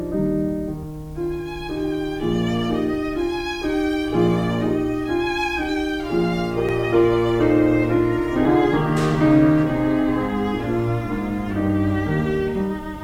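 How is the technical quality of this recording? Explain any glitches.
There are three glitches, at 0.84 s, 6.69 s and 8.45 s, each with the sound jumping forward and no gap. That's likely a dropped buffer (overrun): the hardware overwrote about a tenth of a second before the software collected it, and the edges were spliced together.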